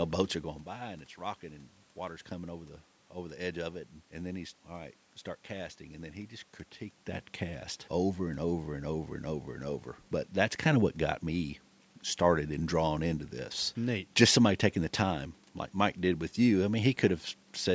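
No technical faults can be heard anywhere in the speech.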